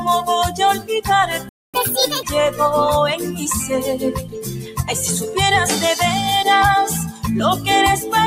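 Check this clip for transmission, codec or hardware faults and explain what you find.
Several faults turn up: a speech-tuned noise suppressor working on non-speech sound, one playback stall with a sped-up recovery, and three spots where the suppressor cuts the sound.

Throughout, held sounds and tails pump and thin out, swinging by roughly 10 dB, because a noise suppressor applied to music or sounds treats steady content as noise.

At 1.49 s the sound drops out for about 0.25 s, a playback stall, likely from the player running out of data or its thread being blocked.

From 1.74 to 2.23 s it plays 1.5 times fast, about seven semitones sharp: catch-up at higher speed, resampling the backlog to regain lost time.

At 3.18 to 3.43 s, 4.16 to 4.84 s and 7.07 to 7.25 s, steady parts sink by about 5, 12 and 12 dB. This is sound cut by the noise suppressor, which mistook it for noise.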